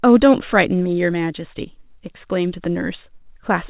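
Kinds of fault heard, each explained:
No faults are heard in this speech recording.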